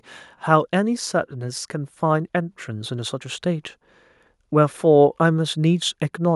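From 1.71 s to 3.77 s the automatic gain control judges the incoming level too low and steadily pushes its gain upward, by about 4 dB over those two seconds. This is automatic gain rising: the whole signal is scaled, so the speech and the background noise behind it swell together rather than the voice alone getting closer. The result is a slow, even lift in loudness and room tone across that stretch.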